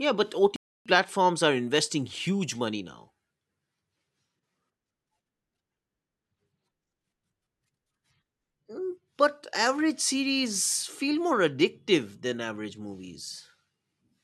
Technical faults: playback stall

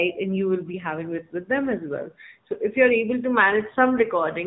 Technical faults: AMR narrowband mobile codec

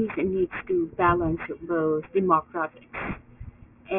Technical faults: aliasing

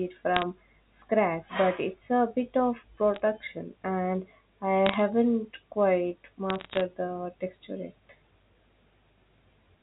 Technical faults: bit errors on a digital phone line

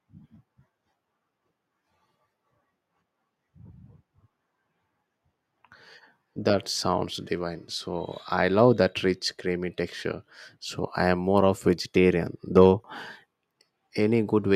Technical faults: none

